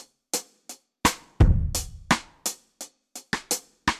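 No technical faults can be heard anywhere in the clip.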